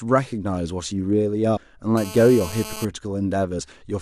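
A speech recording with two kinds of fault. Damaged data in a compressed stream appears twice: a brief glitch from 1.56 to 1.58 s and another blip at 3.58 s. At both points the decoder hits corrupted bytes, misreads or discards the affected frames, loses sync and resumes at the next valid frame header. GSM phone buzz runs from 1.97 to 2.85 s: a hard, raspy 217 Hz buzz rich in harmonics, sitting about 13 dB below the speech and unrelated to it. A nearby 2G handset transmitting in bursts at that rate is inducing RF pulses that the audio circuitry rectifies into audible buzz. The buzz is nearly steady, as expected from a phone in an active call, rather than stuttering as it would during a data transfer.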